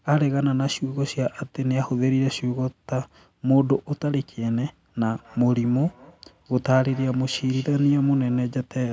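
From 5.09 s to 8.52 s the speech carries a feedback echo between two devices. A second device replays this microphone's signal, which gets picked up again beyond the echo canceller's reach. Words return roughly every 200 ms, thin and ringing, peaking about 24 dB below the speech.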